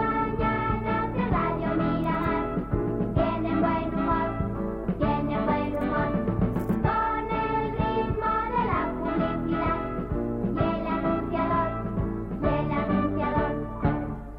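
From 11.50 s to the end, crude rate conversion adds a faint, gritty fizz. It fits unfiltered linear resampling from 48 kHz to 44.1 kHz.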